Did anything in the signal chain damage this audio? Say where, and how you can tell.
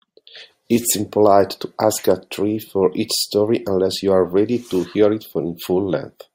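No, nothing along the signal chain has audibly damaged this speech recording, and the signal shows no break, distortion or dropout at any stage.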